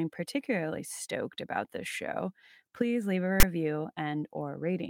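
At 3.40 to 3.43 s, a block of text tags from the file is read by the decoder as though it were audio samples, so the character bytes become waveform values. The result is file tags played as audio: a loud, hard-edged rasp lopsided toward one side.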